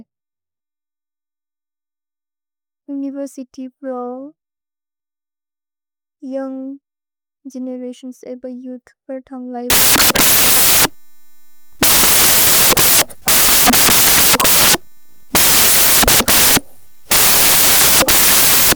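Samples built from the wrong bytes take over at 9.7 s and run to the end of the speech clip. The reader misassembles each sample's bytes, so the rapidly changing low-order bits land in the high-order position. What results is loud, harsh broadband noise, close to white on the louder passages.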